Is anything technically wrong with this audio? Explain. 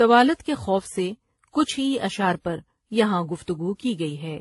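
Yes. Throughout the speech, content stops at about 11.3 kHz, and mixed artefacts sit together: smeared, swirly highs alongside a grainy, pre-echo-prone texture. This points to transcoding between lossy codecs, likely a low-rate HE-AAC stage re-encoded through WMA and finally MP3, each stage compounding the last.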